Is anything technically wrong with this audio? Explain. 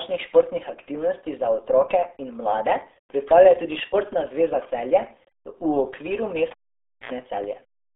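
Yes. Two faults are audible.

The first runs through the whole clip. It is the RealAudio 14.4 codec. This was a low-rate speech codec built for dial-up modems, and the damage here fits an 8 kbit/s stream. The speech sits in a narrow telephone band, roughly 300 Hz to 3.5 kHz. Nothing survives above about 3.7 kHz. Coding damage is heavy. Consonants lose their edge, and the voice sounds muffled, gargly and boxy.

The second is a cable pulled and plugged in, from 6.51 to 7.12 s. A live lead was yanked and reinserted. A pop marks the disconnect. Then comes near silence for about 0.55 s. As the plug goes back, only the tip touches at first, so about 76 ms of 60 Hz mains buzz leaks through. A second pop follows when the connection seats and the sound returns.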